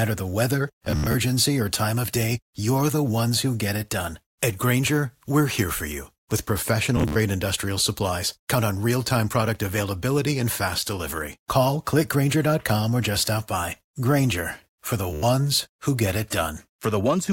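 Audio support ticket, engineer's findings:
Bluetooth stutter, 0.85–1.15 s, 6.97–7.16 s, 15.13–15.23 s. Link dropping or delaying packets; receiver replays last buffer. Speech turns to a machine-gun buzz, about 160, 107 and 93 ms lost, longest run 80 ms, then resumes further along.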